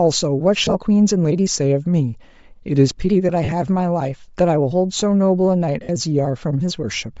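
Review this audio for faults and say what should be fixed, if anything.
The speech has a breathy, grainy edge on the upper frequencies the whole way through, likely Bluetooth LC3 compression, with damage that suggests a low bitrate around 32 kbps. A higher LC3 bitrate setting would fix it.

Lost LE Audio frames cause short noisy smears at 0.63–0.76 s, 3.44–3.53 s and 5.83–5.89 s, where the decoder repeats the last spectrum with scrambled phase. In the second, one gap runs about fifty milliseconds. Better link margin or retransmissions on the Bluetooth path would prevent them.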